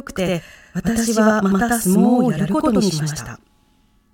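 Channel delay (doubling) runs through the whole of this speech clip: one channel arrives about 92.9 ms late, which fits a 4096-sample buffer, and summing both to mono leaves a second copy at equal level, heard as a distinct slap echo trailing every syllable.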